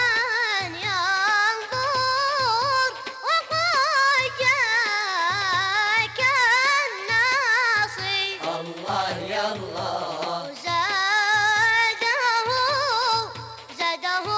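No technical faults occur at any point, and the audio arrives through a wideband call path whose codec stops at 8 kHz.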